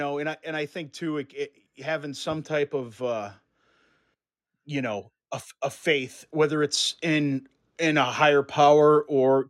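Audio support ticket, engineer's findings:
Automatic gain rising, twice: 0.44 to 3.34 s, about 5 dB; 6.31 to 9.45 s, about 6 dB. Speech and background swell together over roughly three seconds. AGC stage on capture path. It judges input too quiet and ramps gain up.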